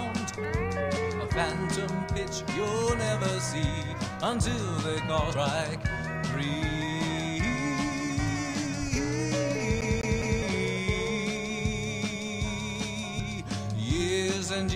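Compressed frames skipped at 3.22 s: one 32 ms frame goes missing, so about 30 ms of audio vanishes and the sound jumps ahead at the join. Compressed frames skipped again at 5.33 s, this time about three frames, so the sound leaps ahead roughly 100 ms. CD stuck on one turn from 9.81 to 10.42 s: a scratch keeps throwing the laser back, so a 205 ms slice plays three times in quick, even succession, with a short mute at each jump. Compressed frames skipped at 13.2 s: about two frames drop out, skipping roughly 70 ms.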